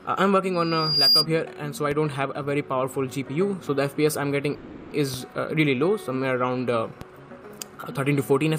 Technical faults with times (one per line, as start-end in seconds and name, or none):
0.53-1.26 loudspeaker feedback squeal
1.91 DC step
4.54-4.92 call audio freeze
5.14 DC step
7.01 DC step